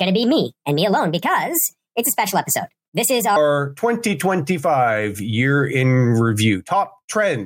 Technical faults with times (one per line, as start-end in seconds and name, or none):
0.00-3.36 wrong sample rate